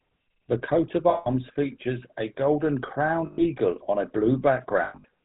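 Throughout the speech, the GSM full-rate codec is plainly audible. Nothing passes above 4 kHz, and the voice carries the gritty, buzzy texture of a vocal-tract model driven by a sparse, regularly spaced pulse excitation, which fits a 13 kbps GSM full-rate stream. Fine detail in the voice is replaced by a coarse, synthetic grain.

Lost GSM frames occur three times. From 1.1 to 1.28 s, between "coat of" and "features a golden", about 160 ms of audio is missing. The decoder fills the gap by repeating the last good frame, so the sound freezes into a rough, metallic ring. From 3.26 to 3.42 s, between "features a golden" and "on a", a 120 ms loss produces the same held, ringing buzz. From 4.84 to 5.05 s, 160 ms of losses are spread over about 200 ms, with the longest unbroken run about a tenth of a second. This gives several short metallic stutters rather than a single smear.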